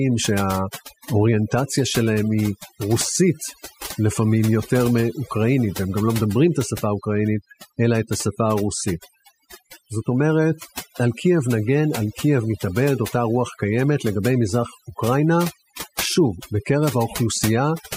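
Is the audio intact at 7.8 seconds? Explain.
No. Overdone noise removal affects the whole clip, including 7.8 s: bands near the noise floor are pushed down, leaving twinkling specks rather than steady hiss.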